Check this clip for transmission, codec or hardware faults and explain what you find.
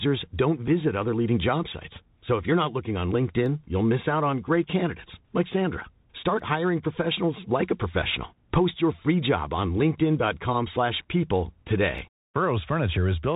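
Two faults are present in the speech: a Bluetooth headset codec shaping the whole recording, and three isolated clicks.

Bluetooth CVSD headset codec, throughout: a one-bit delta coder, consistent with a 64 kbps link, tracks the waveform in adaptive steps. Nothing passes above 4 kHz, and s sounds turn scratchy over a granular hiss.

Dropped samples, at 3.46, 6.39 and 11.98 s: likely a fraction of a millisecond missing, so the waveform jumps abruptly. Each is a single sharp click.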